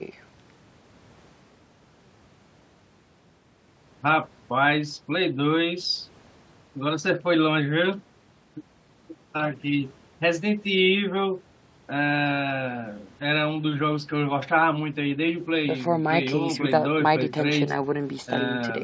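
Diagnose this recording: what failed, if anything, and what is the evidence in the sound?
Nothing failed: the speech shows only the normal signature of call microphone processing, with the lowest bass trimmed by its high-pass filter and no content above 8 kHz, and no stage in the chain shows a defect.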